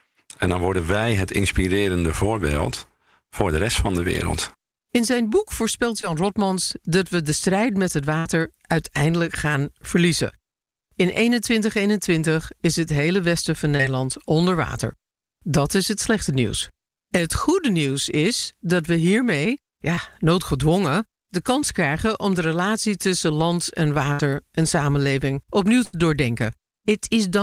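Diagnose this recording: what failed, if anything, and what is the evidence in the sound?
The network path failed, with short concealed packet loss at 6.01 to 6.05 s, 13.77 to 13.81 s (between "het hele westen van" and "onder water") and 19.95 to 19.99 s (just before "noodgedwongen de kans krijgen"). Each time about 20 ms of speech never arrived in time. The decoder extrapolated the preceding sound for 14 to 21 ms and cross-faded back, leaving a tiny smear or wobble. On a spectrogram the harmonics run unnaturally flat for a moment, and the waveform shows a short repeated cycle.

A burst of packet loss, also in transmission, occurs at 8.19 to 8.27 s, 24.13 to 24.21 s and 25.85 to 25.95 s, the last right after "en samenleving opnieuw". About 60 ms, 60 ms and 80 ms of audio went missing. The receiver stretched the last sound for 61 to 81 ms while attenuating it, giving a held buzz or fading hiss before speech resumes further on. 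The spectrogram shows frozen, dimming bands, and the waveform shows a decaying envelope into an abrupt restart.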